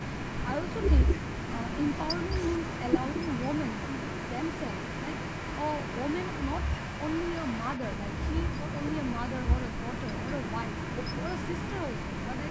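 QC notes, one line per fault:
0.00–0.46 s, echo leak: the far end's echo canceller likely let its microphone pickup through, so a delayed copy of the speech, about 178 ms behind and about 10 dB quieter, comes back as a faint doubling at the very start.
1.06–1.17 s, speech suppressed in double talk: with both sides talking at once, the echo canceller likely mistook the talker for loudspeaker echo and pulled the level down, so the speech drops sharply, by roughly 30 dB at its deepest, for about a tenth of a second.
7.03–8.45 s, echo leak: residual loudspeaker pickup likely slipped past the echo canceller again, this time returning the speech about 197 ms late and about 10 dB down, heard as a trailing ghost behind the speech for nearly a second and a half.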